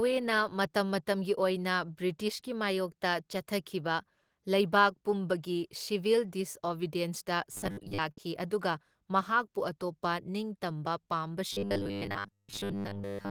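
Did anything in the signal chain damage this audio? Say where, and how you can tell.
Yes. Robotic sound from repeated short buffers at 7.52–8.00 s and again from 11.53 s to the end: the speech turns into a rigid metallic buzz at 100 Hz, with about half, then most, repeated. A 10 ms segment looping at the driver or buffer stage is the likely cause.

Burst of packet loss at 8.11–8.20 s, a network fault: the receiver held and faded the last sound for 56 ms, concealing the gap, then speech resumed with 60 ms of audio missing. The sudden jump forward after the fading tail gives it away.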